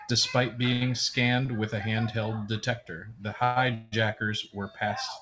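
At 0.73 s a short stall from a late packet holds the sound for about 82 ms, until 0.83 s, and a second one at 1.46 s stretches it by about 22 ms, to 1.50 s. In each, the next packet arrived late, the jitter buffer emptied, and the receiver prolonged the last sound until it came, then resumed without losing anything. Each stall is a held, faintly buzzy sound. On a spectrogram the harmonics run flat and unchanging for that stretch. In the waveform the same cycle repeats.

Two call audio freezes follow, from 3.44 to 3.58 s and from 3.74 to 3.94 s, lasting about 121 ms and 178 ms. Both are likely caused by packets held up on the network, which drained the jitter buffer and left the receiver to continue the last sound as a fading buzz. Neither reaches silence. On a spectrogram each freeze shows a smeared, dimming band where the sound should move on. In the waveform the amplitude decays. Playback then resumes where it stopped. 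In the spectrogram, nothing appears above 8 kHz, which fits a G.722 call path.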